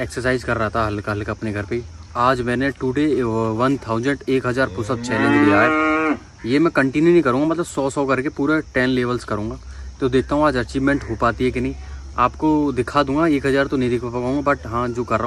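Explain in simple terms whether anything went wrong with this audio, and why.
One stereo channel likely dropped out briefly, from 2.72 to 2.77 s, so the sound suddenly dips quieter for that split second.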